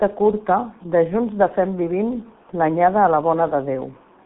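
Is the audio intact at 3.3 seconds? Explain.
No. The G.723.1 codec runs through the whole clip. Nothing passes above 3.8 kHz. The heavy, low-rate coding, which fits about 6 kbit/s, leaves speech muffled, hoarse and blurred.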